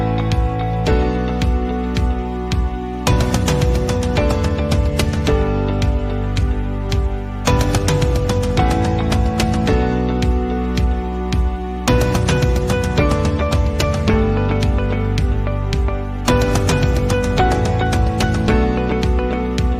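No technical faults can be heard anywhere in the recording. At no point does anything in the sound point to a problem.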